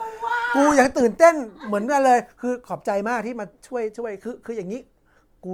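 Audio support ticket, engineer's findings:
Generation loss throughout: swirly, hollow, smeared speech with blurred attacks. Likely repeated MP3 re-encoding, around four passes at what sounds like 96 kbit/s; quantisation noise compounds. Nothing above 19.9 kHz.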